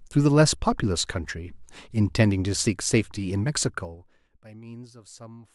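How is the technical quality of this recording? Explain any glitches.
One glitch stands out: zipper noise in the speech between 3.58 and 4.44 s. The gain is dropped by roughly 25 dB in unsmoothed 3 dB jumps, about ten per second. Each jump leaves a small click, so a fast ticking rides on the speech as it fades.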